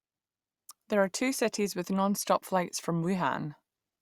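No technical faults can be heard anywhere in the recording; the signal stays continuous and steady throughout.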